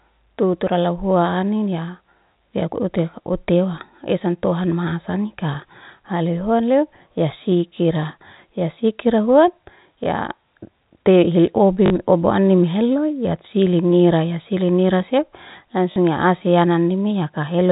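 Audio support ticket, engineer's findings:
Packet loss with last packet repeated: a small blip at 10.04–10.06 s (20 ms, consistent with one 20 ms packet), and short robotic stutters at 11.86–11.90 s and 15.92–15.96 s (40 ms each, consistent with two packets). Receiver replays the previous packet, not pitch-aligned, and the longer runs buzz near 50 Hz. Waveform shows a copied block. Spectrogram shows 50 Hz banding, all within the 4 kHz ceiling of the G.711 telephone path.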